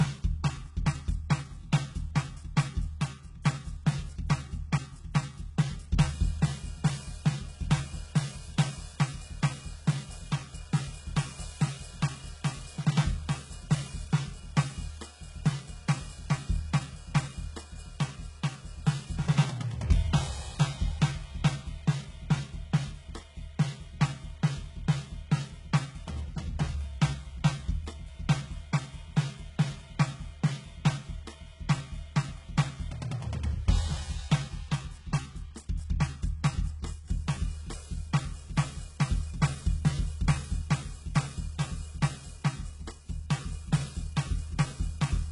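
All the way through, the music's treble sounds rebuilt rather than real, gritty and metallic, cutting off near 11.1 kHz: likely heavy HE-AAC compression at a very low bitrate, roughly 12 kbps.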